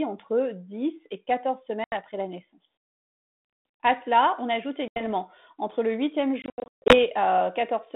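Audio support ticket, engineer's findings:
Packet loss on an ADPCM call, three events on a G.726-style line (band about 200 Hz to 3.6 kHz, fits 32 kbit/s):
1.84–1.96 s, just before "la naissance": 80 ms hard-edged gap, about four packets.
4.88–5.01 s, between "cela on ajoute" and "entre le huitième": 80 ms gap, same signature.
6.42–7.00 s, after "entre le huitième": 340 ms lost in bursts over 480 ms, longest run 140 ms, around fifteen packets.
Waveform: flat silent blocks with vertical edges. Spectrogram: blank columns, then a brief level or texture mismatch as the decoder's predictor and step size resync with the sender's, settling within tens of ms.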